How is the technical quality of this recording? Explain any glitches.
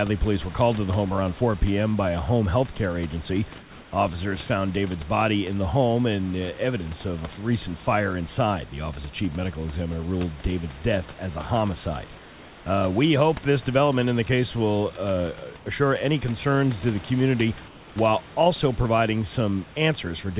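The speech comes over a narrowband call line, with nothing above 4 kHz, which fits G.711 telephone coding, and a steady room background sits about 22 dB below the voice. Three pauses have a glitch.

Comfort noise in place of the background: at 12.18 to 12.66 s, just after "death as a homicide"; at 15.58 to 15.66 s, between "the case will uh" and "assure any concerns to"; and at 17.68 to 17.96 s, between "concerns to the community" and "while also providing". In each pause the real room sound, already about 23 to 24 dB below the loudest speech, gives way to a flat, textureless hiss about 2 to 3 dB quieter, then snaps back when speech resumes. The likely cause is discontinuous transmission. The sender stops sending audio while it detects no speech, and the receiver fills the gap with synthetic noise roughly matched to the background.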